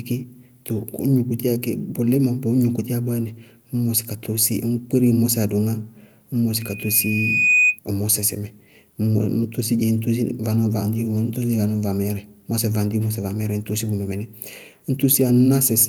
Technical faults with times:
6.61-7.79 loudspeaker feedback squeal

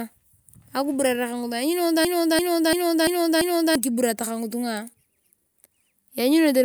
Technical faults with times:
2.05-3.75 system hang loop

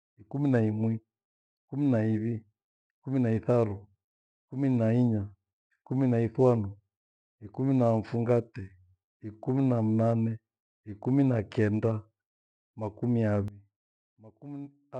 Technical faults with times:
13.48-14.99 sudden gain jump

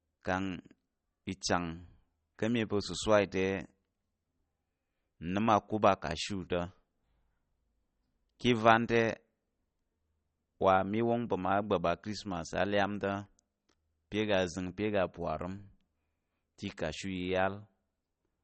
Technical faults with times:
0.00-18.44 MP3 compression

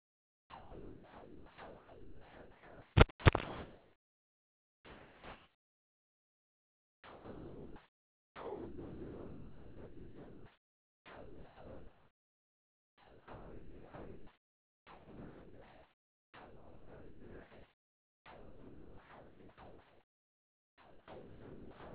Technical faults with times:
0.00-21.94 sound dropped by the voice detector

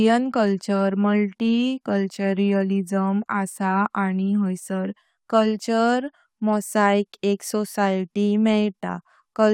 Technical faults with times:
none

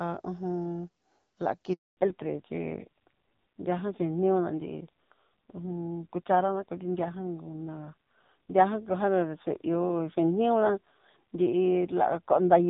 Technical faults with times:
1.73-1.97 handover gap
1.97-12.69 fallback to narrowband

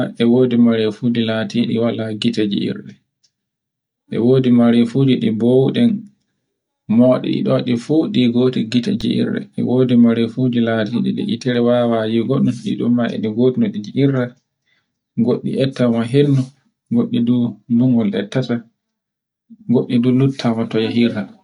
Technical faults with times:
9.01 underrun with held sample

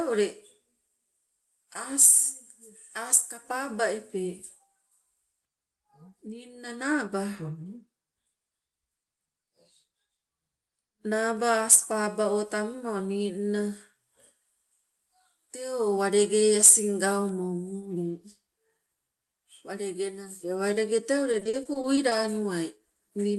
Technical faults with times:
21.31-22.13 repeated packet loss (robotic sound)

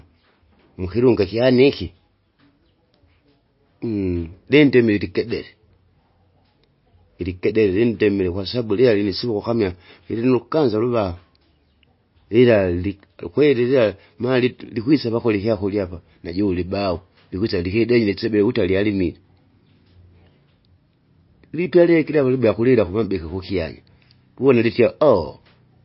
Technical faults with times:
0.00-25.85 MP3 compression

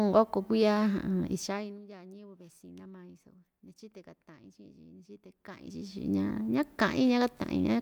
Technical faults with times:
none

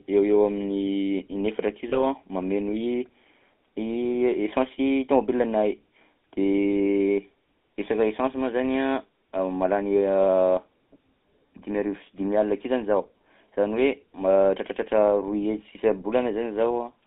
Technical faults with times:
0.00-17.07 GSM full-rate codec
1.90-2.05 lost GSM frames

